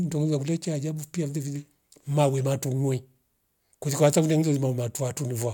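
No technical faults can be heard at any point in the recording.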